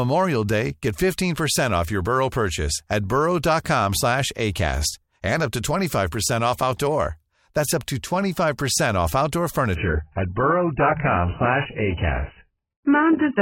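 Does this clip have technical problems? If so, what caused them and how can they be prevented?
Yes. From 9.75 s to the end, the speech suddenly loses everything above 3 kHz and turns smeared. That sounds like an adaptive stream dropping to a much lower bitrate, probably near 8 kbit/s. A larger playback buffer or a higher minimum bitrate would prevent it.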